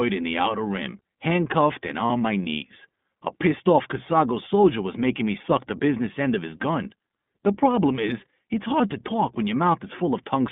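The whole recording passes through the iLBC codec, which confines the sound to a band of about 150 Hz to 3.5 kHz and codes each 20 ms frame's excitation independently. That leaves a plainly rough, synthetic edge that fits the 15.2 kbps mode, unlike the smeared, watery quality of transform codecs.

At 2.06 to 2.11 s, between "outer rim handcuffed and" and "my knees", there are lost iLBC frames. The decoder fills about 40 ms, which fits two 20 ms frames, by repeating the last pitch cycle with added noise. The result is a brief buzzy, held vowel rather than a silent dropout, and the voice is right again almost immediately afterwards.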